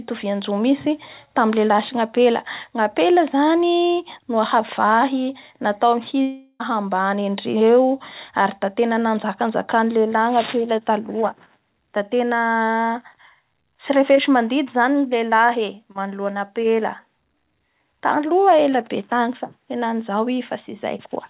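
From 6.22 to 6.62 s, the audio stream was likely interrupted by a long network dropout, leaving roughly 380 ms of sound that never arrived. The receiver covered almost the entire gap, about 376 ms, by extending the last sound into a buzzy, fading tail, followed by a brief silence of about 10 ms before the audio resumes with that stretch missing. The narrow band, with nothing above 4 kHz, suggests a G.711 A-law call path.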